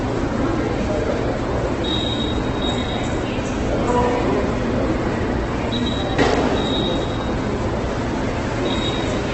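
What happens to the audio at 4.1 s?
At 4.1 s the sound is rough and grainy, with tonal parts smeared into noisy texture and nothing present above about 8.2 kHz, so the top end is dull and closed off. This runs through the whole clip, not just this moment. The likely cause is heavy Opus compression in its music (CELT) mode at a bitrate that sounds close to 12 kbps. With so few bits, the encoder keeps each band's overall energy but fills in detail with folded copies of lower bands or with noise, while the audible band is cut back to wideband.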